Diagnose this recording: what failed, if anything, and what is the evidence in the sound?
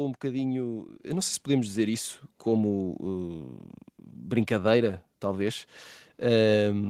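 At 1.02 s, between "um bocadinho" and "eu não sei se", there's a microphone volume step-up: call processing raised input gain about 7 dB at once, lifting voice and background together.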